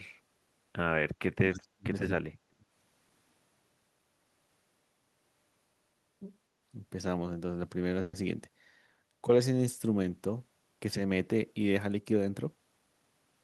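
Speech, with three separate faults. From 1.14 to 2.64 s the voice sinks hard, by about 40 dB at its deepest. It stays pulled down across that second and a half. This is speech suppressed in double talk. The likely cause is that both ends were talking at once. The echo canceller could not tell this talker from returning loudspeaker echo. So it pulled everything down together. At 8.01 to 8.15 s there is a call audio freeze. For 120 ms the last sound is stretched out and fades. There is no true silence in it. This likely comes from packets stalling in transit and the jitter buffer running dry. When they arrive, the speech resumes exactly where it left off. Nothing is lost, but the gap adds 120 ms of delay. From 12.12 to 13.01 s there is a jitter buffer speed-up. The speech runs at 111% speed. The pitch stays the same, yet it sounds hurried. The buffer was holding more audio than its target. 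To shrink the delay, the receiver cut many tiny pitch-length slices in a row. About 100 ms of audio goes missing this way.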